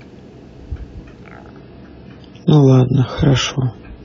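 A speech clip with an adaptive stream switching to a lower bitrate at 1.47 s, lasting to the end. The quality drops suddenly, with no gap. Nothing remains above 7 kHz and codec artefacts rise. The sound points to a slowed connection forcing a roughly 16 kbit/s AAC version.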